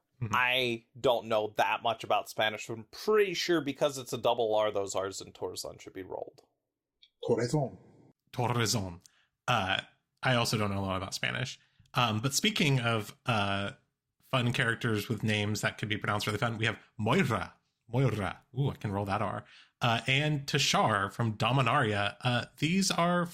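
No technical faults can be heard anywhere in the speech. There is nothing at any point that suggests a problem in how the audio was captured or delivered.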